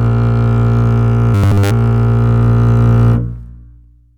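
From 1.35 to 1.71 s the music collapses into a rigid, metallic 100 Hz buzz: robotic sound, likely from one 10 ms buffer repeating throughout that stretch.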